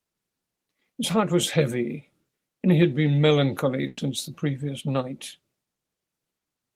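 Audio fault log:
3.87 to 3.99 s, burst of packet loss: about 100 ms of speech never arrived, so the receiver kept extending the last sound and lowered it as the gap went on. The result is a short held buzz or hiss with no true silence. Speech then resumes about 100 ms further on, with that stretch missing. On a spectrogram the harmonics run flat and fade before an abrupt jump, and the waveform shows a repeating, decaying cycle.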